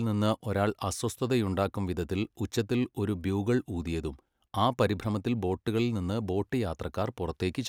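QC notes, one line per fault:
No dropouts, clicks, distortion or level problems are audible anywhere in the speech.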